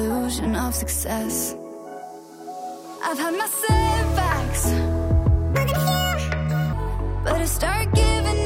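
From 5.54 to 6.73 s there's a section at the wrong speed. That stretch of audio suddenly runs about 1.66 times too fast, so it rushes by and jumps up in pitch by roughly ten semitones, the tempo and pitch shifting together rather than separately. Then it snaps back to normal at 6.73 s. The likely cause is that chunk being played back or resampled against the wrong clock, so it came out faster than it was recorded.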